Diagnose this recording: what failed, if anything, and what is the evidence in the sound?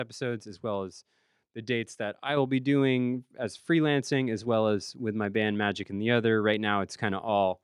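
Dropped samples, heard as single sharp clicks at 0.96 s (between "as well" and "the dates that I"), 4.13 s, 5.35 s (after "well as with my") and 6.54 s. Each is a thin vertical line across the spectrum where the waveform jumps straight to a later value. A handful of samples, well under a millisecond, is missing each time. That is too brief to remove any audible sound, and it is likely a driver or buffer stage losing samples.

Microphone volume stepped up at 2.37 s, between "the dates that I" and "will be". Speech and background rise together by about 5 dB in a single step rather than a smooth ramp. That points to call processing: automatic gain control judged the microphone too quiet and raised the device's input volume mid-phrase, so everything captured after that moment sits at the higher level.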